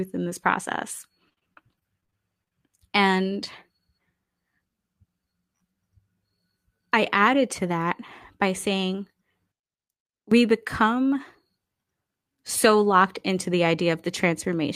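From 1.29 to 2.53 s, just after "in this process", repeated packet loss (robotic sound) chops the speech with a dozen or so short holes, the longest 48 ms. The receiver patches each hole by extending the previous sound, which gives a choppy texture with pieces missing. About 22% of the stretch is filler. On a spectrogram, smeared, flattened harmonic bands alternate with brief breaks. The waveform shows repeated near-copies of the same cycles.

Between 6.97 and 7.78 s a jitter buffer speed-up plays the speech at about 104% of its normal rate while keeping the same pitch. Around 40 ms of audio is trimmed in small pitch-period slices to cut the excess buffered delay, so the phrase moves a little faster. The spectrogram's harmonic spacing stays the same while syllables shorten a little. The waveform shows no gaps.

From 9.52 to 10.32 s, right after "by saying", the speech collapses to a faint residue about 20 dB quieter. 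The likely cause is one channel inverted, so the centred voice cancels when the two channels are summed to mono. The waveform envelope shrinks sharply, and the spectrogram dims across all frequencies.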